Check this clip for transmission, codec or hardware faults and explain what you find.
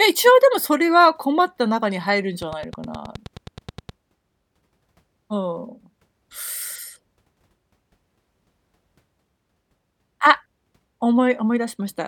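One fault is present: a train of clicks running from 2.42 to 3.90 s in this speech clip. Electrical interference from nearby equipment, or a faulty connection or power supply, is likely injecting a short pulse into the signal path at a steady 9.5 per second. Around fifteen near-identical clicks result, evenly spaced and peaking about 5 dB above the speech, so they tick sharply over it and stay plainly audible in any gaps.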